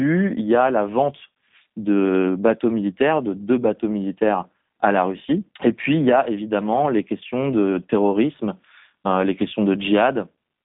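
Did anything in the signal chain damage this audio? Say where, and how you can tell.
Yes, at the codec stage: G.729 coding runs through the whole speech clip. A spectrogram shows an empty region above 3.8 kHz and a band of about 150 Hz to 3.7 kHz. The rough, synthetic texture from pulse-rebuilt frames fits an 8 kbit/s G.729A coder.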